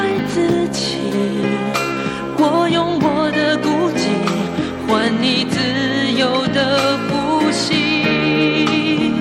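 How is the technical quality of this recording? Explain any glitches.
No technical faults can be heard anywhere in the recording, so there are no glitches to explain.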